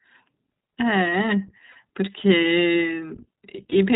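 The whole clip runs through the iLBC codec. Everything above 4 kHz is gone, and the speech has that slightly rough, synthetic edge, plainly audible here. The sound fits iLBC's 15.2 kbps mode with 20 ms frames, each coded on its own.

Around 1.72 to 1.76 s you get lost iLBC frames, a 40 ms gap where the decoder loops the last pitch cycle with some noise, so it sounds like a short, buzzy held vowel. Then between 3.56 and 3.74 s there are a couple more single-frame dropouts, each only about 20 ms. They're scattered rather than back to back, so they come across as tiny breathy stutters, and the voice snaps back right away each time.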